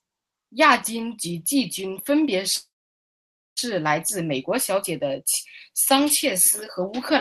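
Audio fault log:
2.55–3.59 s, call audio freeze: after "季军分别" the sound smears into a brief fading buzz, then about 0.9 s of near-silence before "来自美国" resumes, likely a jitter-buffer underrun. Nothing's lost, just a 1 s gap inserted.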